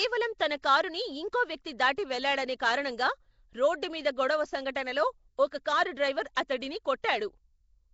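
Throughout this speech clip, a rough, hissy halo and a smeared, underwater quality sit on the voice, with nothing above 7.7 kHz, likely from Nellymoser compression at a rate that fits 32 kbps.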